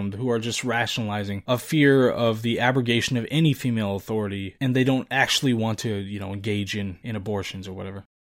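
Speech recording with no technical faults audible anywhere in it.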